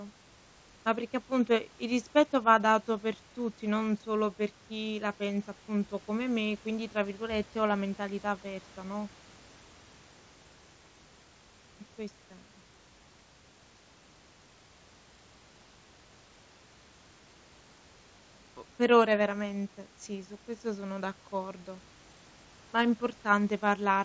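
No technical faults can be heard in this speech recording. It arrives over a WebRTC call path using G.722, so nothing reaches above 8 kHz, and the room noise sits about 31 dB below the speech.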